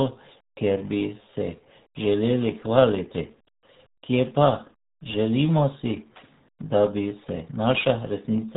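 Throughout the speech, the RealAudio 14.4 codec cuts everything above 3.8 kHz and heavily mangles what remains. The speech turns muffled and gargly, which points to an 8 kbit/s dial-up codec. A plain telephone band-limit would sound dull but clean, without this gargle.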